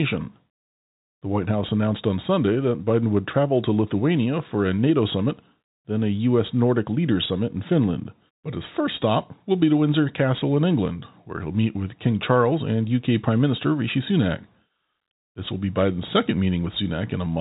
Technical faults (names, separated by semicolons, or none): none